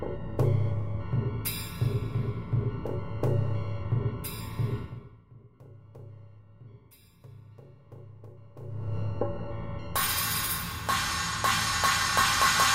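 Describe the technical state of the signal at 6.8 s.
At 6.8 s the signal is intact, with no fault present and any level change there moving smoothly, as a fader would.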